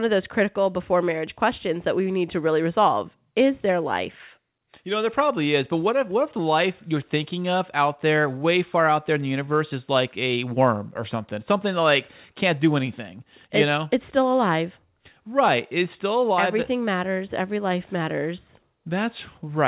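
The speech clip shows no technical faults; its content stops at 4 kHz, which points to a narrowband call path such as G.711 mu-law at 64 kbps.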